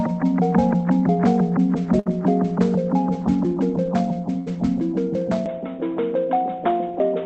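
At 1.99 to 2.08 s and again at 4.39 to 4.49 s you get a burst of packet loss: the receiver stretches the last bit of sound for roughly 60 to 70 ms, fading it out. Then playback jumps ahead, with about 60 ms of audio gone each time.

From 5.46 s to the end the sound abruptly goes duller, with nothing above 3.8 kHz, no gap at the change and roughly the same level, plus a faint new noise floor around 40 dB down. That's likely the input switched to a poorer device.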